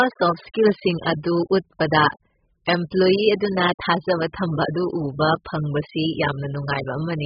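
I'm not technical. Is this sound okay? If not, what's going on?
No, not really. The whole speech clip, start to finish, sounds dull and muffled, with a watery, warbly edge on sustained sounds and a fizzy, smeared quality on hissy sounds like s and sh. Everything above roughly 5.1 kHz is gone, which is where a lot of crispness lives. That's the signature of heavy AAC compression, likely squeezed hard to save space, so the encoder threw away the top end and roughly approximated what was left.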